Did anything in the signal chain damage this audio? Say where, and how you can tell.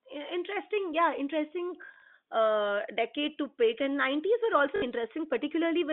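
Yes. It is network packet loss with the last packet repeated. Robotic stutters at 1.82–2.02 s and 4.76–4.82 s buzz near 50 Hz, which fits replayed 20 ms packets.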